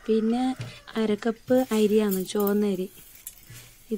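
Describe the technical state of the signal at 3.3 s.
At 3.3 s the signal is intact, with no dropout, distortion, glitch or other audible fault at that point.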